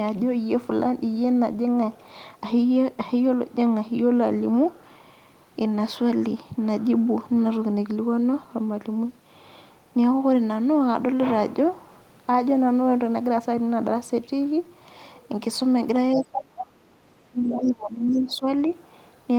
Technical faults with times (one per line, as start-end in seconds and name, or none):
16.15-16.80 speech suppressed in double talk
16.16-16.21 other side's voice leaking through
17.27-18.46 speech suppressed in double talk
17.53-17.72 other side's voice leaking through
18.11-18.21 other side's voice leaking through
18.70-18.74 other side's voice leaking through